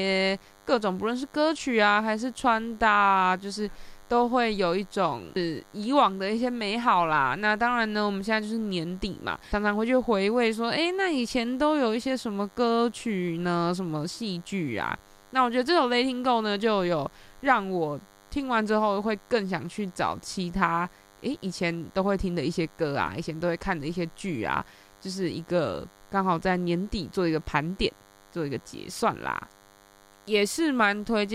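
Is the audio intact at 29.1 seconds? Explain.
No. At 29.1 seconds the speech sits over a steady, thin, rasping buzz with a 100 Hz fundamental and a dense stack of harmonics, roughly 30 dB below the speech. It runs through the whole clip rather than starting or stopping here. This is DECT cordless phone buzz: a nearby DECT handset or base transmits a radio burst every 10 ms, and the audio circuitry rectifies those bursts into a 100 Hz pulse train.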